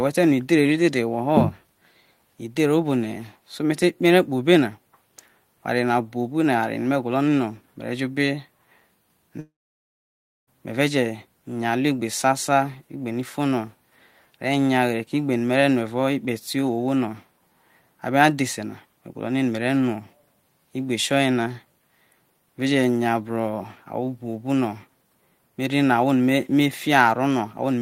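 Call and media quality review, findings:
Long network dropout, 9.39 to 10.49 s: the speech trails off into a fading buzz, then about 0.96 s of silence, and resumes with roughly 1.08 s missing. Likely packet loss on the network path, with receiver concealment stretching the last sound before muting.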